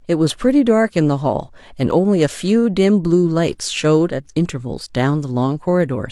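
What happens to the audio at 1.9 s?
At 1.91 s the speech hits an overlap between stream segments. Two segments of about 1.0 s each claim the same stretch of time, and the player discards the overlapping part even though it held unique sound, so roughly 40 ms up to 1.95 s simply vanishes. You hear a tiny skip forward. On the waveform the trace jumps abruptly to a new level; the spectrogram shows a thin broadband vertical line at the join.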